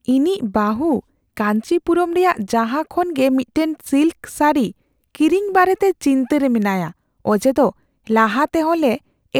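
From 3.02 s to the end at 9.39 s, the converter's sampling clock wanders, so each sample lands a little early or late by roughly a couple of microseconds. This is sample clock jitter, and the timing error becomes an amplitude error wherever the speech waveform changes quickly. The result is a faint hiss and roughness riding on the voice, around 40 dB below it, strongest on loud and sibilant moments and gone in the pauses.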